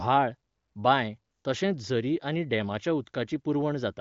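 Listening through the speech, nothing stood out as a fault, and the band limit of the wideband codec path is heard as the expected ceiling just above 7 kHz.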